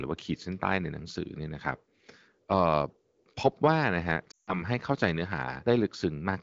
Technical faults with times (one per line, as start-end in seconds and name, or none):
4.31-4.63 lost AMR speech frames